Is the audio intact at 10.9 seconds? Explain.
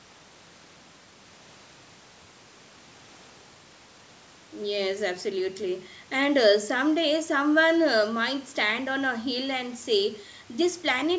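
Yes, the speech at 10.9 seconds is intact, carried cleanly through the call's microphone processing, which holds everything below 8 kHz and trims only the lowest bass.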